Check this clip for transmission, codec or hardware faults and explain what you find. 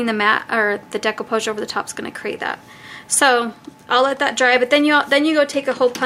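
One fault is present.

From 1.54 to 4.57 s, clock drift buffer slips give three clicks exactly 1.52 s apart, likely from mismatched clocks dropping or repeating samples. Random dropouts lack this regularity.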